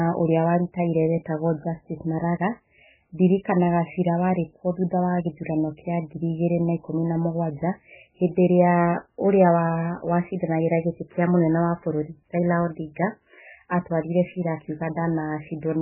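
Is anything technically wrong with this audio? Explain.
Yes. Throughout the speech there is no content above 3 kHz, and the remaining band sounds watery and swirly with smeared attacks. This is likely heavy MP3 compression: the encoder cut the treble and switched weak frequency lines on and off between frames, which fits a very low bitrate near 8 kbps.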